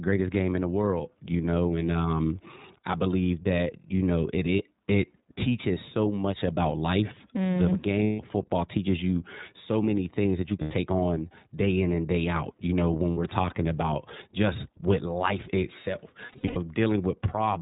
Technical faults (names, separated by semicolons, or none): iLBC codec; lost iLBC frames